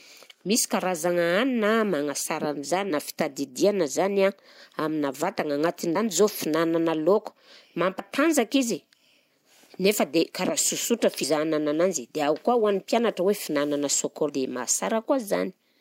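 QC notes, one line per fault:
2.89 s, 5.95 s (between "amina vatagna" and "zao fihinanana lôka"), 7.98 s, 11.22 s, 14.28 s, compressed frames skipped: the sound jumps forward with a short smeared blip, losing roughly 50, 150, 70, 70 and 200 ms. Whole 26.1 ms frames were never decoded, and overlapping neighbours blur each join.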